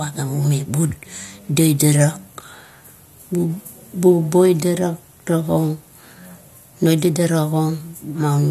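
Nothing goes wrong in this bit of speech; there's no technical fault to point to anywhere in it.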